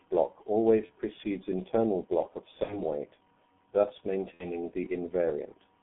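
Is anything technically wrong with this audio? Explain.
Yes. The speech carries heavy G.723.1 codec damage throughout, and packet-loss concealment disrupts it three times.

G.723.1 codec: The whole clip has been squeezed through a very low-rate telephony coder, consistent with roughly 6.3 kbit/s. The band is confined to about 150 Hz to 3.4 kHz, and the coarse, slowly updated voice model leaves the speech muffled and hoarse, with smeared consonants. On a spectrogram, energy stops abruptly near 3.4 kHz, with nothing below 150 Hz, and formants look blocky in 30 ms steps.

VoIP packet loss concealed by the speech codec: This happens at 0.86–0.91 s, just before "precedes internal block of"; at 2.63–2.82 s, between that phrase and "weight thus"; and at 4.35–4.58 s, just after "weight thus". The decoder filled the gaps by repeating its last pitch and filter at falling gain. The first gap fits one lost 30 ms frame, the others two frames. 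The result is a sound stretched out and fading, followed by weak, distorted speech while the decoder recovers. The waveform shows a decaying envelope.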